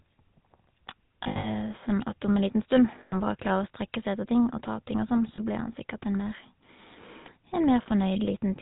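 Speech squeezed through the GSM full-rate codec at 13 kbps, so it's band-limited to 4 kHz with that obvious buzzy, gravelly roughness from the coarse pulse excitation. There are lost GSM frames at 1.24–1.47 s (patchy dropouts, the longest run around 70 ms), 3.00–3.14 s, 5.36 s right after "og sånn", and 7.82–7.87 s. Each one sounds like a brief metallic, ringing hold as the decoder repeats the last good frame.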